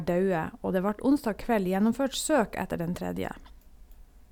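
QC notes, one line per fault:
No faults heard in this speech recording.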